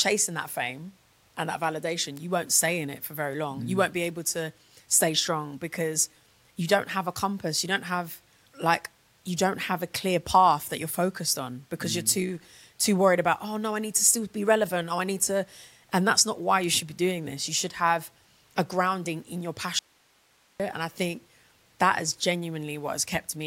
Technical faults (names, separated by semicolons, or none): bit error spike; audio dropout to a faint residue